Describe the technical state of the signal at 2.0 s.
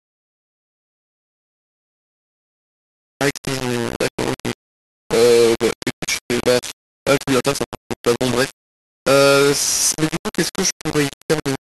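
At 2.0 s the speech is coarse and grainy, as it is across the whole clip, with distortion that tracks the signal and quiet parts breaking up. The likely cause is low bit depth without dither: rounding to about 3 bits leaves error only about 10 dB below the signal.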